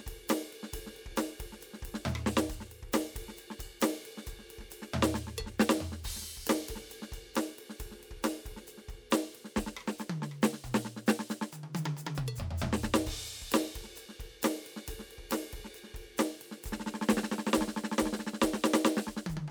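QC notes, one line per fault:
No faults heard anywhere in this music clip.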